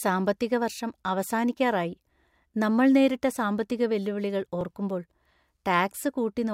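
At 4.61 s, just after "നമ്മൾ നേരിട്ട സാമ്പത്തിക വെല്ലുവിളികൾ", the speech shows overlapping chunks: a 2.5 s processing block began about 7 ms before the previous one ended, so that sliver plays twice at the join, heard as a brief click or stutter.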